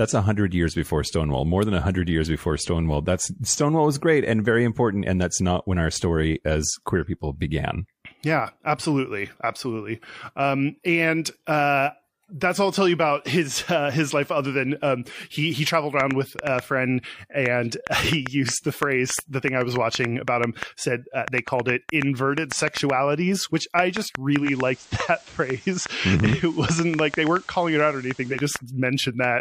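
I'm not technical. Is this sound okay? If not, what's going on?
No. Two things go wrong in the second half.

The first is a train of clicks, running from about 16.0 seconds to the end at 29.25 seconds. Something is injecting a sharp pulse into the audio about four times a second, at an uneven pace, which is likely interference from nearby equipment or a faulty connection or power supply. You hear around fifty loud ticks or pops, each much like the last, sitting clearly on top of the sound and continuing through the quieter gaps.

The second is a digital radio blending to analogue, from 24.38 to 28.43 seconds. The radio lost its digital signal and faded over, in about a seventh of a second, to the ordinary FM broadcast of the same station, then came back. While on FM, a faint hiss appears underneath. The volume stays the same throughout.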